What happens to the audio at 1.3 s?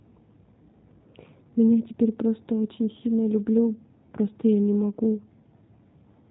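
At 1.3 s, as throughout, G.729 codec coding rebuilds the speech from a filter and sparse pulses at roughly 8 kbit/s, leaving it rough, synthetic and cut off above 4 kHz.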